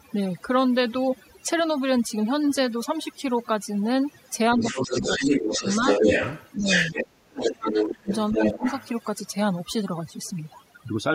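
A speech recording has overdone noise removal from start to finish. The background drops and breaks up into twinkling specks, because bands near the noise floor are cut away along with quiet parts of the speech. A second voice leaks through from 4.52 to 7.07 s and again from 7.39 to 8.89 s. It sits at roughly the same level as the talker. This is likely loudspeaker echo that the echo canceller failed to remove. The main voice is also suppressed in double talk. It dips from 4.56 to 6.08 s, by up to about 10 dB for well over half a second. It drops by about 15 dB from 6.58 to 6.7 s. From 7.27 to 8.63 s it falls by up to about 30 dB for roughly a second. The likely cause is the canceller turning everything down while both sides spoke.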